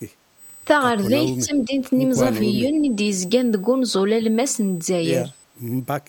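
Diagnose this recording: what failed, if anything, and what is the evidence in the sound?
USB whine runs through the whole clip: a fixed tone at 8 kHz, strongest at its 16 kHz harmonic, about 20 dB below the signal. This is an analogue wiring or power fault. Current drawn in 125-microsecond USB microframes leaks through the supply or ground into the audio path.

Background gated by the echo canceller, 0.13 to 0.36 s: the room sound dips by about 15 dB for roughly 200 ms, then returns. This happens in call processing. The echo canceller clamped the microphone hard while the loudspeaker played, then released it.

Speech suppressed in double talk, 1.27 to 1.74 s and 2.26 to 2.77 s: the speech dips by roughly 10 dB in the first stretch and 5 dB in the second. These are call-processing dips, likely from the canceller confusing the near talker with loudspeaker echo during simultaneous talk and attenuating both.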